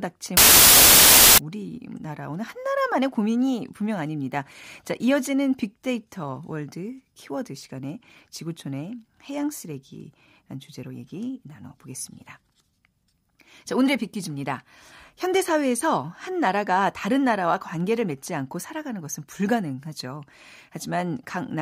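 Wrong sample width runs from 0.37 to 1.38 s. Audio written as packed 24-bit integers is read back as 32-bit integers, so each sample takes in four bytes where three belong. Most values combine bytes from neighbouring samples, and only some keep the real signal's top bits. The speech sits buried under loud, harsh noise, and because three-byte data is consumed four bytes at a time, it plays about 1.33 times too fast and higher in pitch.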